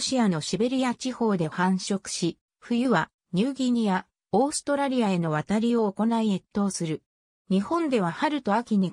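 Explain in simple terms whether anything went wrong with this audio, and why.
Nothing went wrong with this audio: the signal holds steady the whole way, with no dropouts, interruptions or damage anywhere in it.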